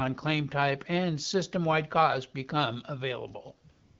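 From 3.71 s to the end at 4.00 s, about 286 ms, AMR comfort noise takes over. The phone judged the talker silent and stopped sending speech frames, so the receiver filled the gap with synthetic noise built from a rough estimate of the background's level and spectrum. It sounds like a smooth, steady hiss switching in. This differs from a dropout or noise gate, which leaves silence. Here, the light AMR-WB coding at 12.65 kbit/s gives way to uniform artificial noise.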